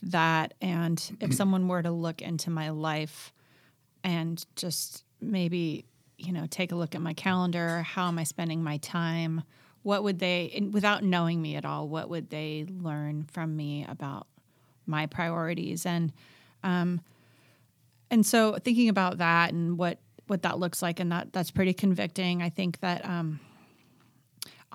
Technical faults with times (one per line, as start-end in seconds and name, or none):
none